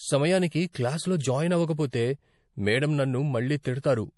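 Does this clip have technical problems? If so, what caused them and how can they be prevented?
Yes. The speech carries MP3 compression damage throughout, likely from low-bitrate encoding. Nothing remains above 11.4 kHz. Weak frequency lines drop in and out between frames, so it sounds watery, which fits roughly 48 kbps. Encoding at a higher bitrate prevents this.

There is also a pre-echo from 0.72 to 0.75 s, just before "క్లాస్లో జాయిన్". Quantisation noise spreads about 27 ms ahead of a sharp attack, so a short hiss comes before it. A higher bitrate or a codec with shorter blocks prevents it.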